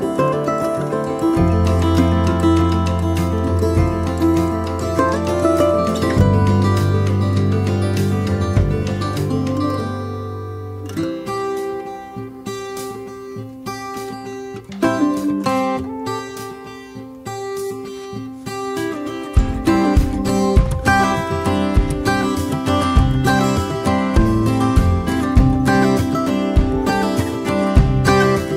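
No technical faults can be heard anywhere in the audio.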